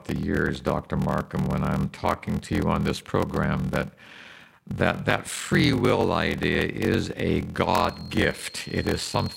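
Block size mismatch (padded), throughout: each block arrives short of the 1024-sample read, zeros fill the remainder, giving a 43.1 Hz buzz and speech slowed to 0.861 speed with its timbre intact.

Feedback whistle, from 7.63 s to the end, after "will idea is a": a thin, wavering 4.2 kHz tone sits well below the speech, likely from a loudspeaker-to-microphone loop held just short of runaway.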